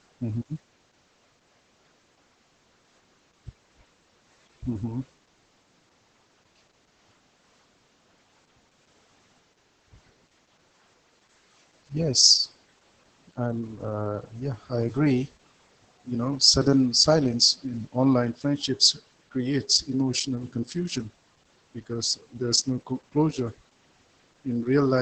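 From start to finish the speech sounds muffled, hoarse and slightly robotic, with nothing above about 8 kHz. This is heavy Opus voice compression. The encoder ran in its SILK linear-prediction mode at wideband, discarding the upper band and coding the excitation signal very coarsely. That roughness replaces natural breathiness and detail, and the damage fits a bitrate of roughly 10 kbps.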